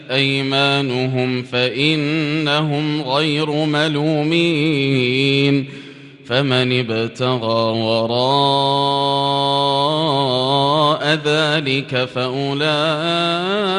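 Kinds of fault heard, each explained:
No faults detected; nothing in the audio warrants flagging.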